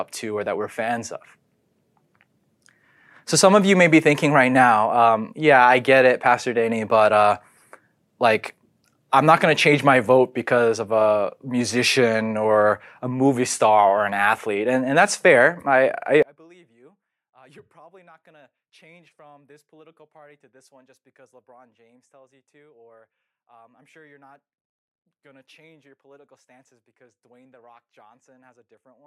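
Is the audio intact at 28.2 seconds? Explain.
No. From 16.23 s to the end of the clip the speech drops by about 36 dB, leaving a faint residue. This is likely one channel inverted: with one stereo channel's polarity reversed, the centred content common to both cancels when they are summed to mono.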